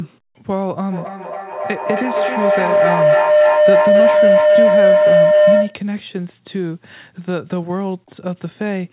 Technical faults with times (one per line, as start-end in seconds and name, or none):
0.92-5.90 feedback howl